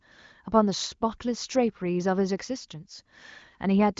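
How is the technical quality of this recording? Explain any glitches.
No glitches or faults can be heard anywhere here.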